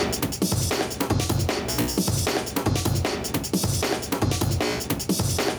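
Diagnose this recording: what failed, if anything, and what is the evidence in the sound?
Gain pumping runs through the whole recording. The level swings by around 10 dB as the gain is pulled down on each loud sound. Loud and quiet passages sit unnaturally close together, giving a squashed texture. The likely cause is input gain set far too hot for the microphone, with a fast limiter or compressor in the processing stage clamping down on each peak and releasing between them.

Dropped samples produce a single sharp click at 3.80 s. It shows as a thin vertical line across the spectrum with no audible gap, because only a couple of samples, a few hundredths of a millisecond, are missing. The waveform jumps straight from one value to a later one, and that discontinuity causes the click. This points to the driver or buffer stage, likely a momentary slip in sample transfer.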